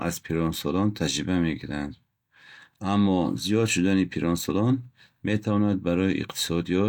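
Nothing stood out on listening to this speech recording.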